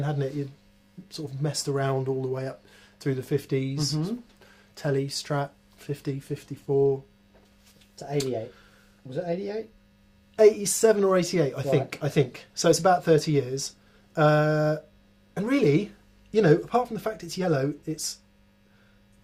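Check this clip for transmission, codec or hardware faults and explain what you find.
I checked the clip and found no faults.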